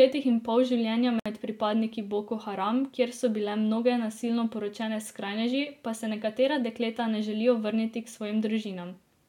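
At 1.2 s the speech breaks off for about 61 ms, until 1.26 s: a gap at a join of encoded pieces, where encoder start delay and last-frame padding were left in. Unlike a dropout, nothing is lost; the speech resumes exactly where it broke off, with smeared edges.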